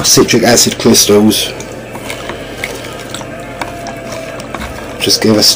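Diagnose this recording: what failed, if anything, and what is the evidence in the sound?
A harsh, buzzy fuzz rides on every loud moment from 0.06 to 1.39 s, and the same grating edge returns from 5.04 to 5.52 s. This is hard clipping. The signal was driven about 11 dB past full scale in the first stretch and about 12 dB in the second, so a converter or fixed-point sample format flattened the peaks. Those squared-off tops add dense high harmonics, which is why the overload sounds like fuzz rather than occasional crackle.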